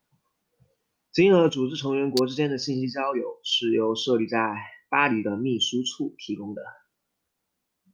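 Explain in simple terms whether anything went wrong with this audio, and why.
At 2.17 s, between "组织成员" and "之间的信", a sharp snap cuts across the speech. This is an electrical switching spike: a very brief burst of energy that sits on top of the sound rather than being part of it. It most likely came from a nearby switch, motor or static discharge, whose arc was picked up by the audio cabling and recorded as a click.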